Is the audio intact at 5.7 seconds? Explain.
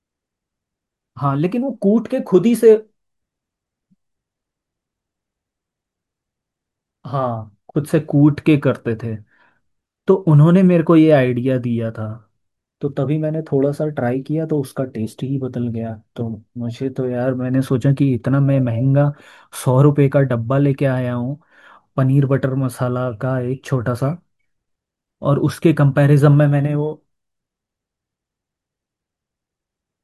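Yes, the audio is intact at 5.7 seconds, with no fault of any kind audible at that moment.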